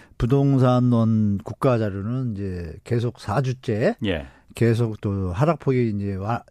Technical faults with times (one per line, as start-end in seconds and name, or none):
none